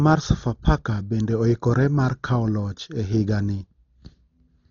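From the start to the end, the speech sounds dull and coarse. Nothing is heard above 7 kHz. The likely cause is heavy Dolby Digital compression, at a rate that fits about 32 kbps. At that rate the encoder narrows the band and gives many frequency lines no mantissa bits. The decoder fills those gaps with dither noise. That leaves a rough, fluttering haze around the voiced tones, and the top end is simply gone.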